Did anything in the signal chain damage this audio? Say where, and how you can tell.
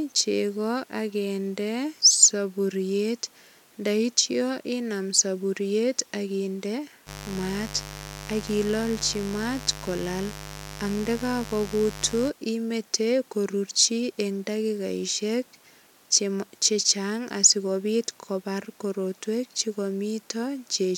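Yes, there's mains buzz coming in at the analogue wiring, from 7.05 to 12.32 s and ending just before "imete korurchi eng dakikaisiek". It's a steady, raspy buzz roughly 15 dB under the speech. A dimmer, rectifier or unshielded run is spiking twice per 50 Hz cycle, spraying harmonics into the kilohertz range.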